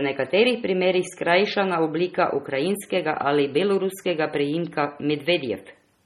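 Speech runs throughout with heavy MP3 compression artefacts, likely from encoding at a low bitrate, with the damage pointing to something around 32 kbps. Nothing is present above 14.5 kHz, where the encoder has cut the treble off. Weak spectral components flicker in and out from frame to frame, giving the speech a watery, swirling texture. Sibilants pick up a metallic chirp, and consonant onsets sound smeared rather than crisp.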